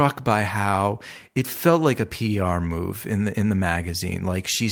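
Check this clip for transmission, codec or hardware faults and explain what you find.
Nothing turns up in this clip to explain.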